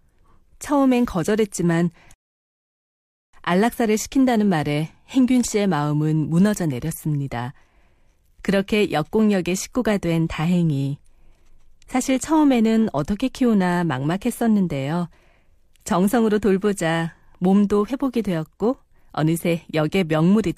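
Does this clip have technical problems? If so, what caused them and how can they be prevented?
Yes. At 2.14 s the speech cuts abruptly to silence and stays silent until 3.33 s, when it picks up exactly where it stopped, with nothing skipped. That is a rebuffering stall: the player used up its downloaded audio, halted playback while it waited for more data, then carried on, adding about 1.2 s to the running time. Preventing it means buffering more audio before playback starts, or streaming at a bitrate the connection can sustain.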